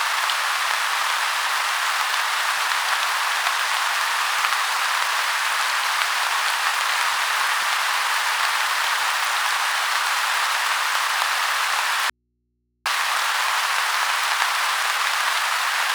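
At 12.10 s the sound cuts out abruptly for 0.76 s, an audio dropout to a faint residue, likely a brief signal loss ahead of a still-live input. Only low mains hum remains, roughly 50 dB down. The waveform collapses to a thin band, and the spectrogram shows only low hum lines until 12.86 s.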